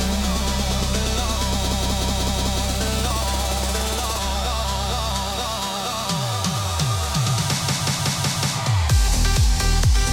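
The audio has a system hang loop twice, from 1.67 to 2.60 s and from 7.62 to 8.55 s. Each time, a 185.76 ms slice of sound repeats exactly five times. At 5.38 repeats per second, it is heard as a machine-gun stutter. The driver stalled while the hardware kept replaying its ring buffer. The loop length fits an 8192-sample buffer. Playback picks up afterwards with essentially nothing skipped.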